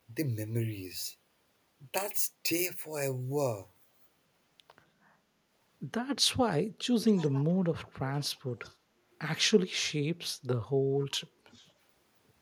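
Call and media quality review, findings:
Echo leak at 7.03–7.55 s, 7.84–7.93 s, 8.14–8.40 s, 8.61–8.75 s, 11.00–11.08 s and 11.53–11.71 s. A delayed copy of the speech arrives 262 ms late, roughly 20 to 35 dB below it. Likely a far-end loudspeaker's output reaching its microphone, with the echo canceller failing to remove it fully.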